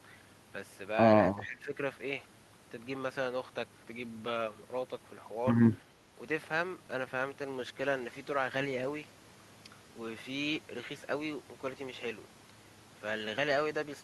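Speech suppressed in double talk occurs from 1.42 to 1.74 s and from 5.85 to 6.13 s. The speech dips by about 10 dB, then by a milder 5 dB or so, likely because an echo canceller mistook overlapping talk for echo and attenuated both.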